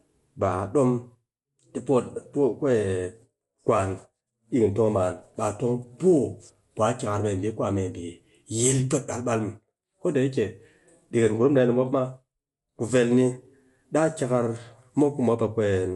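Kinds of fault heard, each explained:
Dolby Digital compression: The speech was likely passed through an AC-3 style encoder starved of bits, which fits a low bitrate of around 64 kbps. To save data it discards the top of the band and leaves many frequency lines with no detail, filling them with noise on playback. Throughout, nothing remains above 11.5 kHz, so the sound is dull and closed-in, and the coding damage is plainly audible as a rough, fluttering grain.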